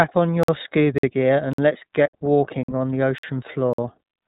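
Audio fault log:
throughout, iLBC codec: the speech has passed through iLBC, a narrowband VoIP codec, here at 15.2 kbps with 20 ms frames. Each frame's excitation is coded on its own, and nothing above 3.8 kHz survives, so the voice sounds boxed-in and telephone-like. The coding damage is plainly audible, giving the speech a slightly rough, synthetic texture.
0.43 to 3.78 s, gap between chunks: the audio arrived in 0.5 s chunks, and 50 ms of silence sits between each pair of them. These holes start at 0.43, 0.98, 1.53, 2.08, 2.63, 3.18 and 3.73 s. They come just after "gear and" and "gear and let's", and just before "on the". No sound is lost, but the speech breaks off at each join with short holes at a steady rhythm.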